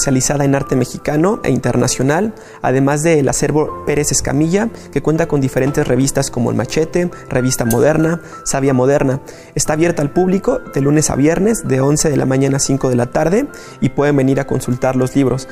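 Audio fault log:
No faults detected; the signal path holds steady with nothing audible to log.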